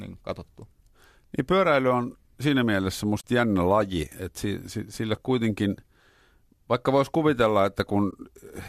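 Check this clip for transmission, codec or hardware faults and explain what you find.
The clip shows two short dropouts, both AAC frame loss with muting. The first runs from 3.21 to 3.24 s, just after "pyöräily on siinä mielessä" and before "jännä laji että si". The second runs from 8.11 to 8.13 s, right after "vaikka voisi kuvitella". Each gap fits the loss of a few frames of roughly 10 ms each, about 30 ms and 20 ms of speech.

The decoder zeroed the missing spectra, and the overlapping windows fade the sound down and back up, so each dropout is a soft-edged hole. A spectrogram shows a narrow vertical band with nearly no energy across all frequencies. The waveform tapers into a near-flat stretch and then ramps back up smoothly.

The light codec colouring throughout is likely low-delay AAC working at a fairly generous bitrate.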